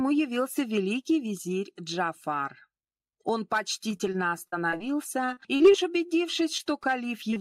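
Across the whole clip the level rises and falls by around 10 dB, a breathing swing that leaves loud and soft passages squashed close together. This is gain pumping. The likely cause is input gain set far too high for the microphone, with a fast limiter or compressor clamping down on every peak and releasing in the gaps.

From 3.91 to 4.82 s, and again from 5.26 to 6.11 s, the sound turns choppy, with small pieces dropping out. This is repeated packet loss. Audio kept arriving late or not at all, in holes of up to about 40 to 44 ms recurring every hundred milliseconds or so. The receiver patched each hole by stretching the preceding sound, so roughly a sixth of each stretch is synthetic fill rather than real signal.

Three brief blips follow, from 6.57 to 6.61 s, from 7.31 to 7.39 s, and from 7.34 to 7.38 s, each heard as a short smear or wobble where a few hundredths of a second seem to waver or vanish. 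These are short concealed packet losses. About 20 ms of audio failed to reach the decoder in time each time, and the gap was filled by continuing the last sound before blending back into the real stream. In the middle event this adds roughly 10 ms to the timing.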